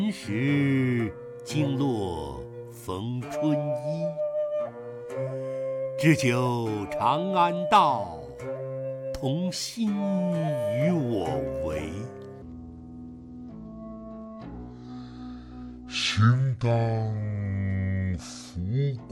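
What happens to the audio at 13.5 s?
At 13.5 s the audio sits inside a section at the wrong speed, running from 12.42 s to the end at 19.11 s, likely played against the wrong clock at 0.617 times its recorded rate. Everything slows and drops about seven semitones, turning deep and sluggish.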